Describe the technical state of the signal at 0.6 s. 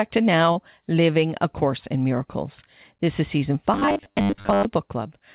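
A short concealed packet loss ends just before this moment, spanning 0.52 to 0.58 s. About 40 ms of the call's audio missed the decoder's deadline. The receiver filled 36 ms of that hole by extending the preceding speech sound, then blended back into the real signal. The result is a brief smear or wobble, where a quick consonant may drop out, in a G.711 path that carries nothing above 4 kHz.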